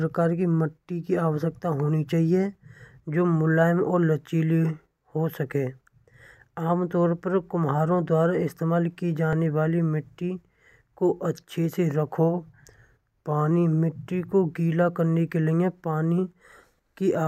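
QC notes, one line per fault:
1.52 s, 9.33 s, 14.89 s, 16.52 s, dropped buffer (overrun): jumps where the audio skips ahead by roughly 5 to 10 ms, likely from samples overwritten before being read; landmarks "की मिट्टी की" to "होनी चाहिए", and "मिट्टी को गीला" to "करने के लिए पानी".
12.19–13.51 s, drift correction step: playback slows by 5.5% and pitch drops 98 cents, nearly a semitone, then snaps back, likely a clock-matching rate step.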